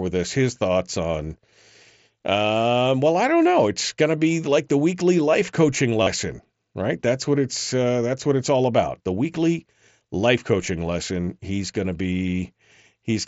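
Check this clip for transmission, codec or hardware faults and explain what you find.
Two brief dropouts of concealed Bluetooth headset packet loss occur in the speech. The mSBC headset codec link carries the full 8 kHz wideband range with only light grain. At 6.03 to 6.07 s, after "the weekly life coaching", about 37.5 ms went missing, which fits a run of five 7.5 ms frames. The receiver filled it by repeating recent waveform, giving a short buzzy, held tone and a slight warble on recovery. At 12.27 s, after "going to", a single 7.5 ms gap is patched almost invisibly.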